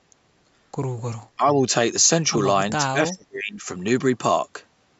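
At 1.36 to 1.47 s the speech dips by about 15 dB for roughly a tenth of a second. This is speech suppressed in double talk, likely because the far side was talking at the same moment and the echo canceller could not tell the near talker apart from the loudspeaker echo. It turned the whole signal down, so the level sags briefly.

At 2.38 s there is a single sharp click, heard as a thin vertical line across the spectrum. This is dropped samples, likely a fraction of a millisecond of data missing from the stream. The waveform jumps straight to a later value, and that discontinuity produces the click. No audible sound is lost.

From 2.85 to 3.66 s a much deeper suppression of the same kind sets in. The speech falls by about 30 dB over roughly 0.7 s and is pushed down hard, likely while the other side is active.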